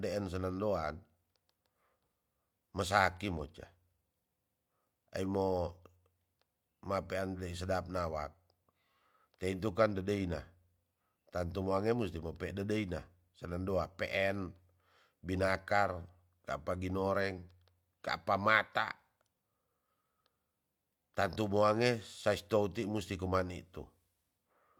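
No technical faults can be heard at any point in the speech.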